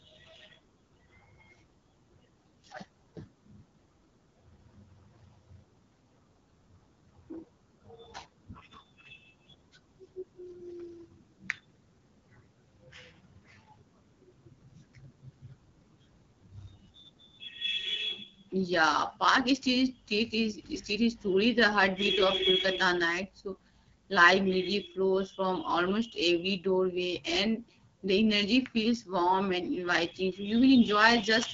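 Throughout, the speech carries AMR wideband (HD Voice) codec damage at a low rate that fits 8.85 kbit/s, sounding rough and raspy, with nothing above 7.6 kHz.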